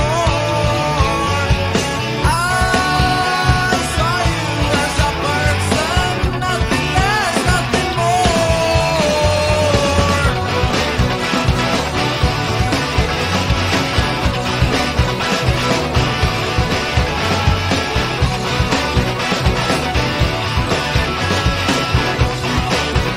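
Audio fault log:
No fault is found in this clip.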